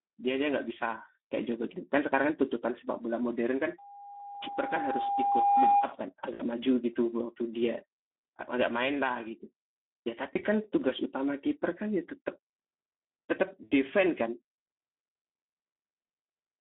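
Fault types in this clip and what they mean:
Speex codec: The speech was coded with Speex at a low-to-middle setting, which fits a bitrate around 11 kbps, inside a 200 Hz to 3.4 kHz line band. Too few bits reach the excitation, so the voice sounds plainly noisy and hoarse, and everything above 3.4 kHz is missing.
Loudspeaker feedback squeal: A microphone picked up its own loudspeaker, and the loop gain passed one at 807 Hz. That tone builds over roughly two seconds from 3.78 s and sits about 10 dB above the speech as a squeal before it stops at 5.95 s.
VoIP packet loss concealed by the speech codec: Packets went missing and the decoder filled the gaps by extrapolating its last pitch and filter at fading gain. The speech turns briefly stretched and fading at 6.34 s (60 ms), 10.35 s (20 ms) and 13.63 s (80 ms), and it stays weakened just afterwards.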